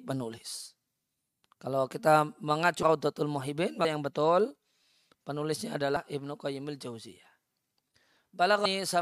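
At 2.82 s the speech jumps forward, and it does so again at 3.84 s, 5.96 s and 8.65 s. These are compressed frames skipped. Whole frames never reach the output, because they were missing or the decoder rejected them. The gaps remove about 0.3 s, 0.15 s, 0.2 s and 0.15 s of audio. That points to several frames lost each time, about 26 ms each.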